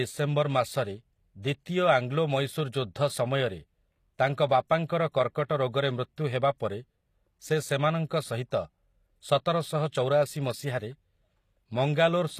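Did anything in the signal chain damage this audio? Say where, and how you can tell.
Yes. The damage sits at the codec stage, likely HE-AAC compression at a low bitrate, which fits a rate around 24 kbps. Only the lower spectrum is properly coded; the treble is rebuilt by copying lower bands upward under a coarse envelope, and nothing is present above 15 kHz. The harmonics across that crossover don't line up, so s sounds in this speech come out gritty and lispy, audibly so across the whole clip.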